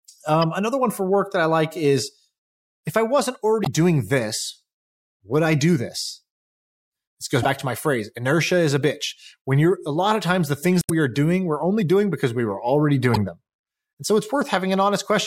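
Short glitches break into the speech at 3.62–3.67 s, 7.42–7.47 s, 10.79–10.90 s and 13.13–13.18 s: damaged data in a compressed stream. Corrupted bytes make the decoder misread frames and lose sync until it finds the next valid frame header.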